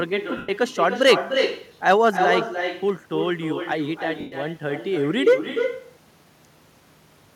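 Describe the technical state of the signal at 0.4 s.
At 0.4 s you're right inside a stretch of lost LE Audio frames, running from about 0.37 to 0.49 s, roughly 112 ms in all. The Bluetooth LE Audio link dropped frames and the LC3 decoder filled the gap by replaying the last good spectrum with randomised phase signs, so the tonal content of the speech smears into a hissy, noisy wash and then fades toward silence as the concealment runs on.

On top of that, the echo with no canceller is present here as it is across the whole clip. The far end is playing the call out of a loudspeaker, its mic is catching it, and nothing is subtracting it, so the speech comes back roughly 300 ms later at about 7 dB below the direct signal. It sounds like a thinner shadow trailing each phrase.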